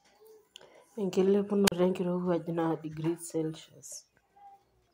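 At 1.66 s the speech hits a wireless microphone squelch dropout lasting until 1.72 s. The radio link from the analogue FM microphone weakens. The receiver's squelch circuit decides the signal is too poor and mutes its output. First a short burst of hiss or static rises. Then comes a hole of near silence, about 38 ms long. The voice then returns.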